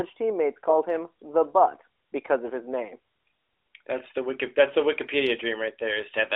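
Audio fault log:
No faults are heard in this speech, which sits in the narrow telephone band of an AMR narrowband mobile codec, about 300 Hz to 3.7 kHz, with the light coding character that fits its 12.2 kbps mode.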